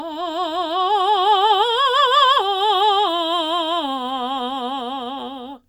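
No technical faults can be heard anywhere in this music.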